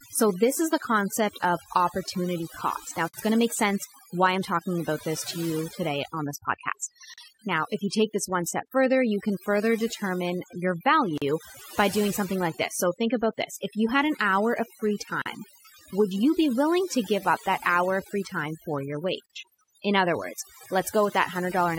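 Overdone noise removal runs through the whole speech clip. The noise reducer was set too strong. It pulls frequency bands down whenever they sit near its noise estimate. The background breaks into twinkling, warbling specks, and quiet parts of the voice are cut away with it.

At 3.09 s a gap at a join of encoded pieces opens, just before "going to make sense". It lasts about 52 ms. The pieces were encoded separately and joined untrimmed. Encoder start delay and end padding leave a short hole in continuous speech, and then the sound resumes.

From 5.15 to 5.27 s, between "why I'm talking about" and "to you today on", a wireless microphone noise hit appears. The FM radio signal faded as reflections cancelled. Receiver noise rose and came through as a short burst of static.

The join gaps recur every 4 s, at 7.14, 11.18, 15.22 and 19.26 s. The one at 15.22 s follows "an hour of free". Each lasts about 40 ms. 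Codec smearing softens their edges, so each drops out briefly before the speech carries on.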